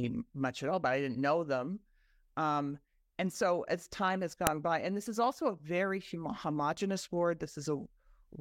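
At 4.47 s, a second piece was joined without stripping its WAV header, so those header bytes play as samples: a file header played as audio, heard as a sharp click in the speech.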